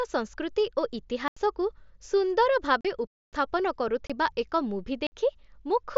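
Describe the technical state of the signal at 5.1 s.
At 5.1 s the signal falls into a block of digital silence running from 5.07 to 5.12 s, about 53 ms of silence, most likely because the output buffer was not filled in time. The speech stops dead and resumes with no fade around a short hole. Unlike a Bluetooth mSBC packet loss, which would be smoothed over, nothing fills this gap.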